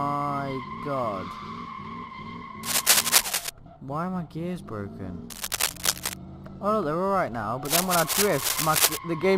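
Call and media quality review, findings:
Cable scratch noise, three bursts: 2.6–3.5 s, 5.3–6.2 s, 7.7–9.0 s. Dense, uneven scratching over the sound; first and last sit a bit above it, middle one about level. Likely a worn cable or connector being moved, contact resistance jumping around.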